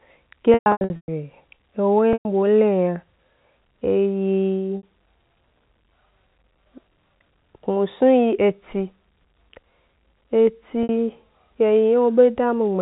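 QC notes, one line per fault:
0.54–1.08 s, 2.13–2.25 s, 4.77 s–4.83 s, 10.83–10.89 s: packet loss with pitch repetition. The first stretch scatters 390 ms of losses across 540 ms, with runs up to 120 ms. The 2.13 s gap lasts 120 ms, and the last two last 60 ms each. The receiver repeats the last pitch period, so the gaps sound like a held, buzzy tone. Longer runs fade to silence after about 50 ms and cross-fade back. Plain dropouts have no such buzz. The gap sizes fit 30 ms packets.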